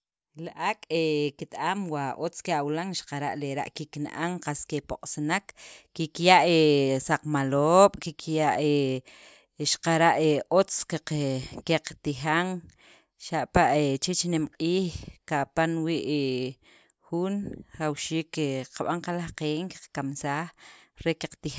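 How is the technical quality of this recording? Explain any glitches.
No glitches or technical faults are audible anywhere in the recording, so there is nothing to explain.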